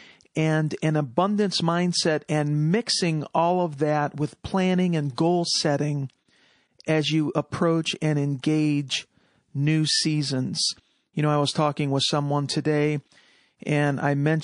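A speech clip with plainly audible codec damage throughout. The sound is watery and swirly. Faint detail flickers in and out. S sounds chirp metallically, and attacks smear. This is likely MP3 compression, and the damage fits a low bitrate of about 40 kbps. At that rate the encoder runs short of bits. It drops the weak frequency lines. At 5.15 s there is pre-echo. A short hiss of about 30 ms leads into a sharp attack. The noise rises about 15 dB above the quiet just before the onset, and the attack sounds blunted. The codec spread the attack's quantisation noise across the whole block, including the silence before it. The spread fits a long block of about 52 ms, with no switch to short blocks.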